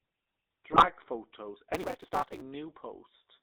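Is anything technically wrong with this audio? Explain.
Yes, three faults are audible.

Throughout, the GSM full-rate codec gives plainly audible buzzy, gravelly roughness. Its pulse-driven vocal-tract model and band of roughly 250 Hz to 3.7 kHz strip detail.

From 0.72 to 0.87 s, GSM bit errors corrupt the decoder's filter, pitch and gain values, so the speech breaks into squawks, pops and gargling.

From 1.73 to 2.42 s, a block size mismatch (truncated) discards each block's tail, which fits a 256-sample read size. The result is a 188 Hz buzz, with speech running 1.88 times fast.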